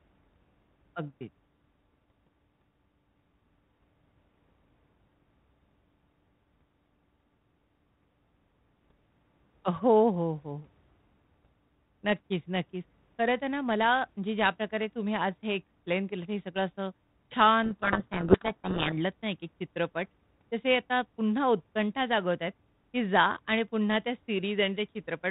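A codec payload misread runs from 17.64 to 18.93 s. For about 1.3 seconds the receiver unpacks the G.726 code words with their bits in the wrong order, so each sample's difference value is wrong and the adaptive predictor drifts off track. The speech is buried under harsh, grinding distortion until sender and receiver agree again. Around it, the 32 kbit/s G.726 path carries narrowband telephone speech with light coding roughness.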